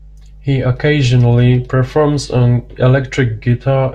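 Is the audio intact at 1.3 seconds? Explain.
Yes, the speech at 1.3 seconds plays through intact, with no dropout, click, glitch or other fault at that moment.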